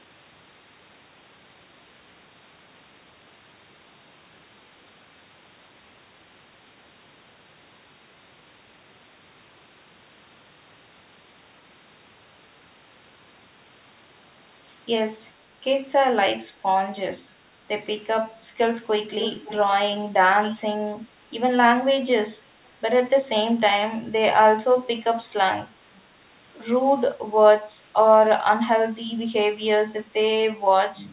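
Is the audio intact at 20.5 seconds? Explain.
No. Between 20.43 and 20.6 s there is an echo leak, likely from the far side playing the call over a loudspeaker while its echo canceller failed to fully cancel what its microphone picked up, so that residue was sent back down the line. You hear a brief, faint copy of the speech arriving about 537 ms after the original, roughly 20 dB below the main speech, a short ghostly trace under the direct sound.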